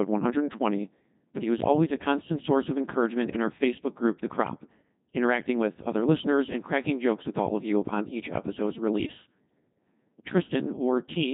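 From the first second to the end, the speech has been through a Codec 2 vocoder, and it's been hit hard. Only pitch, voicing, energy and a rough spectral shape survive, rebuilt from sine waves, so it sounds robotic and buzzy, which fits a very low rate around 2.4 kbit/s.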